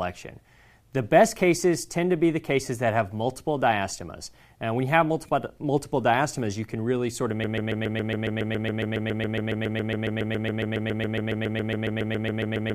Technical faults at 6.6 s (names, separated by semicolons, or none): none